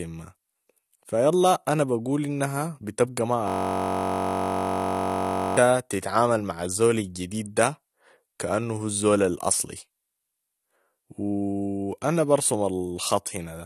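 Throughout the speech, nothing is present above 13.2 kHz, and the sound is plainly dull and smeared, with a fizzy, warbling edge on sibilants. This is likely AAC compression, with the AAC-LC encoder running at a low bitrate around 32 kbps and discarding high-frequency detail.

From 3.48 to 5.57 s, right after "بقول انها بتبقى ما", a system hang loop replaces the speech with a steady buzz at 46.9 Hz. A single 21.33 ms fragment repeats nearly a hundred times, which fits a 1,024-sample ring buffer cycling while the system is frozen. Speech resumes with "تتعامل مع الزول الجديد".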